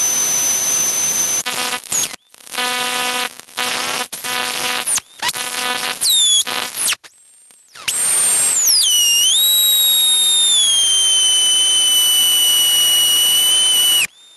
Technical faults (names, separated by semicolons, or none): gain pumping